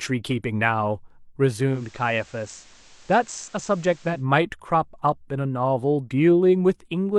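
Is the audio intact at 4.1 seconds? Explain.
No. From 1.65 to 4.26 s the receiver is in a digital radio blending to analogue episode: it lost the digital stream and cross-faded over about 210 ms to the station's FM broadcast. At 4.1 s the speech is therefore the FM version, about 2 dB quieter, with hiss roughly 30 dB down. A spectrogram shows a raised noise floor; the waveform's envelope sits slightly lower.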